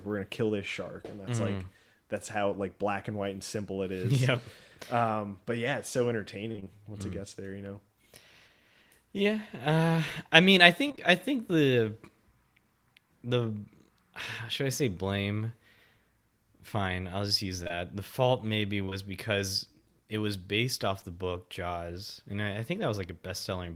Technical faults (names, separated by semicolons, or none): repeated packet loss (robotic sound); short concealed packet loss